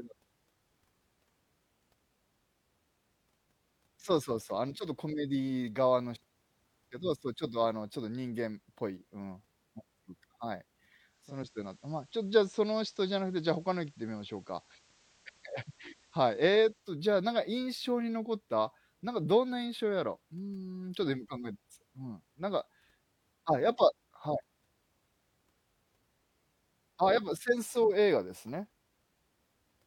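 A hybrid receiver carrying this speech lost its digital stream at 11.01 s and cross-faded, over about 0.41 s, to the station's FM analogue signal, returning to digital at 16.99 s. That is a digital radio blend to analogue. During the FM stretch the level drops by about 2 dB, and a steady hiss rises to roughly 30 dB below the signal.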